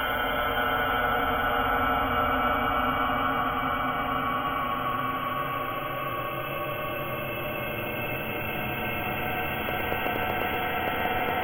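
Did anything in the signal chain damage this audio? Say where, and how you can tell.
Yes: a train of clicks from 9.69 to 11.30 s, about fifteen near-identical pops at an irregular 8.75 per second, standing well above the sound. That's likely interference in the analogue wiring.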